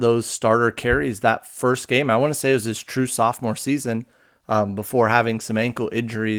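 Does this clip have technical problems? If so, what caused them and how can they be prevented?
No, there's nothing here that needs fixing, since the Opus voice compression this speech has been through is doing its job and nothing calls for prevention.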